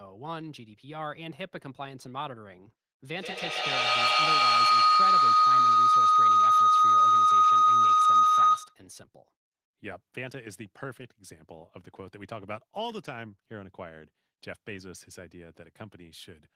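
From 3.12 s to 8.83 s a feedback howl builds as a loop through a second device gains on each pass, narrowing to a tone near 1.5 kHz about 17 dB above the speech, pulsing roughly every 150 ms. A spectrogram shows a bright horizontal band.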